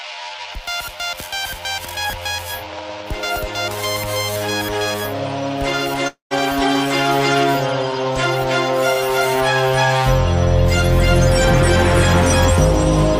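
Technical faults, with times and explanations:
2.73–3.80 s, train of clicks: about ten uneven clicks, roughly 7.5 per second, near signal level, likely interference or a faulty connection injecting repeated pulses.
6.07–6.34 s, long network dropout: about 240 ms of audio never arrived; the gap is filled with fading, then briefly silent, sound, likely from lost network packets.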